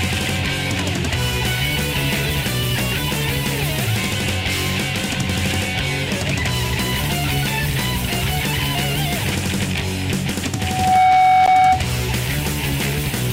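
At 10.53 s a loudspeaker feedback squeal begins: a microphone is hearing the loudspeaker it drives, and at 748 Hz the loop gain exceeds one. Over roughly half a second that single tone swells to about 10 dB above the sound, lasting until 11.85 s. Unlike a steady test tone or hum, it grows by itself.

At 11.46 s, while the squeal is still sounding, a 13.6 ms gap at a join of encoded pieces cuts through. Two separately encoded pieces were joined without trimming the encoder's start delay and end padding. The sound breaks off, its edges smeared by the codec, and resumes exactly where it left off, unlike a dropout that skips material.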